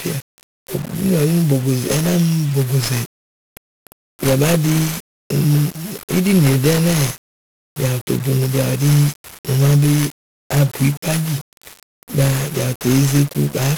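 Speech, carried throughout by 1-bit DFPWM compression, with heavy damage: each sample is a single up-or-down step of an adaptive level, so dense broadband quantisation noise coats everything. The result is fuzzy and crackly, treble drowned in hiss, which fits a rate near 48 kbps.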